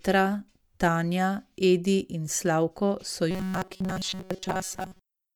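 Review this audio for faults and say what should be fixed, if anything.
Robotic sound from repeated short buffers runs from 3.31 s to the end of the clip at 5.35 s. The speech turns into a rigid metallic buzz at 188 Hz, matching a roughly 5.3 ms segment replayed over and over while most of the real audio is skipped, likely because new audio arrived too seldom. Keeping audio delivery ahead of playback, through a larger jitter buffer or a higher-priority audio thread, would prevent it.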